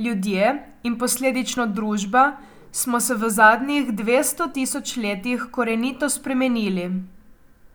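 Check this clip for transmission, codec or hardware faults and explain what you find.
Two brief skips in the speech, at 1.57 s and 4.55 s, about 3 s apart. Each drops roughly 20 ms and joins the sides with no gap, likely audio missing between chunks as a 3-second recording block closes and the next opens.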